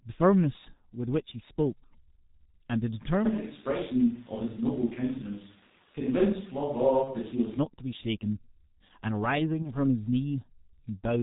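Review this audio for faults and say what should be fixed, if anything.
The whole recording runs through the G.723.1 codec at about 6.3 kbit/s, and the damage is heavy. Nothing above 4 kHz survives. The 30 ms frames and slow model updates leave the speech muffled and hoarse. Consonants smear together. Using a wideband codec at a higher bitrate would prevent this.

VoIP packet loss concealed by the speech codec appears at 7.04–7.15 s and 9.62–9.72 s. Each gap fits a single lost 30 ms frame. The decoder stretches the previous sound into a fading buzzy tone or coloured noise. Because each frame builds on the last, recovery lags past the gap. A jitter buffer with forward error correction, or a more reliable network path, would prevent this.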